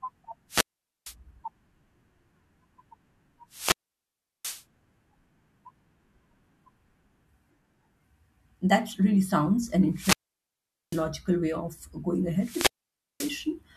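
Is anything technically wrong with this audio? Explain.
Yes. The speech drops out four times, at 0.49–1.15 s, 3.50–4.64 s, 9.93–11.07 s and 12.37–13.47 s. Each time hiss swells, the sound falls to near silence for 0.46, 0.73, 0.80 and 0.54 s, then returns. This is a wireless microphone squelch dropout: the radio signal weakens and the receiver's squelch mutes the output.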